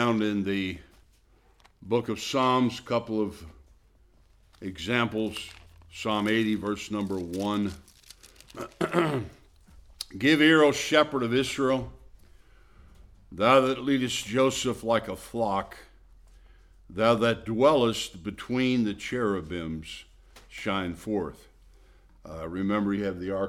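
Nothing in the audio stood out as a technical fault on listening.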